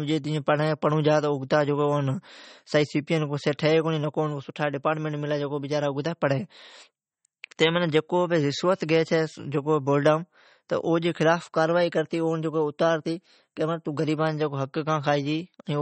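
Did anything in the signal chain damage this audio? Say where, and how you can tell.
Yes. The damage is at the codec stage and runs through the whole speech clip: nothing above 8.4 kHz, plus a watery, swirling texture. This is likely MP3 compression at a low bitrate, around 32 kbps, where the encoder cuts the treble and drops weak spectral detail that flickers between frames.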